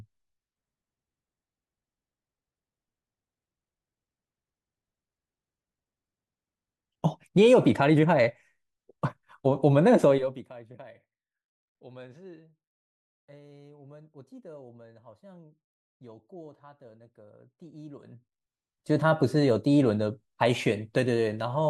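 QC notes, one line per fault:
No faults found.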